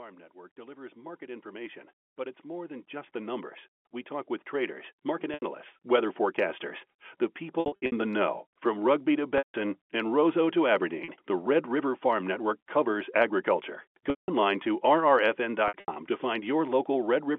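From 0.32 to 6.71 s, automatic gain rising: the gain control judged the input too quiet and lifted it by about 20 dB, so speech and background swell together. Packet loss with pitch repetition follows at 5.34 s (80 ms), 7.6 to 7.92 s (220 ms scattered, longest run 60 ms), 9.38 s (160 ms), 11.04 s (40 ms), 14.1 s (180 ms) and 15.68 to 15.96 s (160 ms scattered, longest run 80 ms). The receiver repeated the last pitch period to cover each gap, so the short losses sound like a held, buzzy tone and the longer ones fade into silence. All of this sits within the narrow telephone band of the G.711 line.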